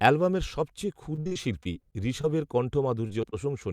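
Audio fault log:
1.15–2.25 s, repeated packet loss (robotic sound): choppy sound with holes. Repeated short gaps, the longest 60 ms, were patched by extending prior sound, about a fifth of the stretch.
3.07–3.11 s, 3.21–3.25 s, 3.31–3.45 s, short concealed packet loss: brief smears or wobbles. Each time about 20 ms never arrived and was filled from the preceding sound; the last slightly lengthens timing.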